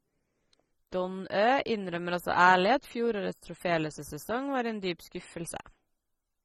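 Throughout the speech, the audio shows AAC compression damage, with a sound that fits AAC-LC at a low rate near 24 kbps as the likely cause. At that budget the encoder has too few bits for each frame, so it pulls the high-frequency cut-off down and leaves gaps in the spectrum. The result is plainly audible: the speech sounds dull and smeared, and sibilants and sustained sounds take on a warbling, fizzy texture.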